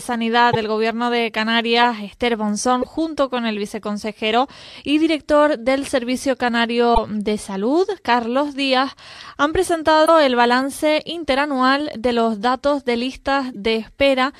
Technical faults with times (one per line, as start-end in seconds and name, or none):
0.48-0.55 damaged data in a compressed stream
2.78-2.85 damaged data in a compressed stream
6.91-6.98 damaged data in a compressed stream
10.02-10.09 damaged data in a compressed stream
13.49-13.56 damaged data in a compressed stream